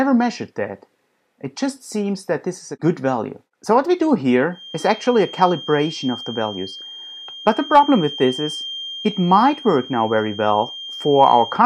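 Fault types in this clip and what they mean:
feedback whistle: From 4.49 s to the end of the clip, a thin, steady whistle at about 3.2 kHz sits behind the sound, roughly 15 dB below it and swelling and fading slowly in level. The likely cause is an acoustic loop from loudspeaker back into microphone running right at the edge of feedback, so that single high frequency keeps ringing on its own without building into a full howl.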